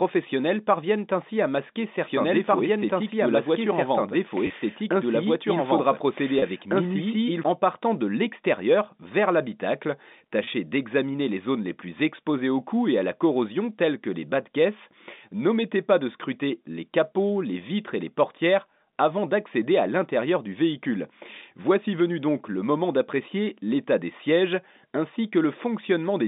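A doubled audio track runs from 2.03 to 7.43 s, starting just after "parviennent ainsi à masquer" and ending before "en partant de l'extérieur". A second, full-band copy of the speech trails the original by roughly two seconds at about the same loudness, so earlier phrases replay underneath newer ones. The copy carries no reverberant tail or room colouring, and it cuts in and out abruptly at both ends. The likely cause is a second, slower capture path or an edit that left two copies out of step.

Packet loss with pitch repetition occurs at 4.47–4.50 s and 6.39–6.42 s, both inside the doubled stretch, and again at 10.44–10.47 s, between "de l'extérieur vers l'habitacle" and "d'examiner les zones les". Each gap is 30 ms long, which fits a single lost packet. The receiver fills the hole by repeating the last pitch period, so each dropout sounds like a brief, slightly buzzy sustain rather than a click or a silence. 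The telephone coding, which limits the sound to roughly 200 Hz to 3.7 kHz, can be heard throughout.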